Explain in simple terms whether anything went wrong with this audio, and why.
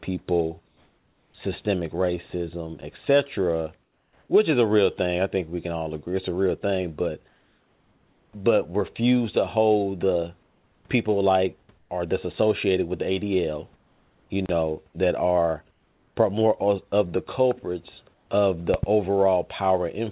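Two things went wrong in this speech recording.

Comfort noise in place of the background: in seven pauses, the real room hiss gives way to a smooth, featureless and slightly quieter hiss. This happens at 0.68–1.34, 7.28–8.33 (between "a real thing but" and "but refuse"), 10.43–10.85, 11.78–11.9, 13.76–14.3, 15.71–16.16 and 18.14–18.29 s (after "of the culprits"). The likely cause is the call system going quiet when it detected no speech, with the receiver filling the gaps with synthetic noise.

Loud pop: at 18.74–18.86 s, just after "of the culprits of", two sharp pops in quick succession sit well above the speech, which carries on underneath. This is likely an electrical spike, such as from a connector, a switch, static or a driver glitch.

The call line itself removes everything above 4 kHz, which gives the dull telephone quality heard throughout.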